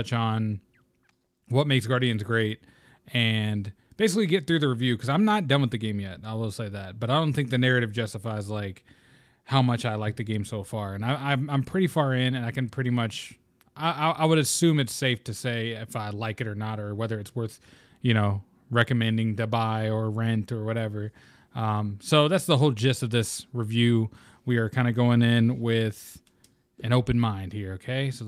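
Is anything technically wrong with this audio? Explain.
No, nothing technically wrong can be heard here.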